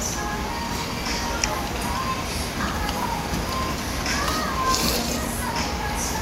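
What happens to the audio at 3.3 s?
At 3.3 s the sound sits inside a run of periodic USB or driver dropouts. They continue from 0.27 s to 6.03 s, repeating every 0.25 s. Something blocks the USB bus or audio driver at that fixed interval. Each time, roughly 2 ms of audio is lost and replaced by silence. The gaps come through as evenly spaced ticks, four per second, heard only while sound is present.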